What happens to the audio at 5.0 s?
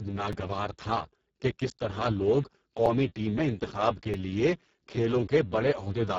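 At 5.0 s the speech carries Speex codec damage, which runs through the whole clip rather than starting there. The damage is heavy and points to a very low bitrate, around 6 kbps, where the CELP coder has too few bits to model the excitation. The speech sounds hoarse, noisy and close to robotic, and nothing is reproduced above 7.7 kHz.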